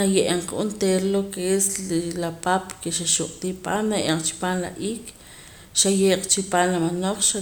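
No technical faults are audible.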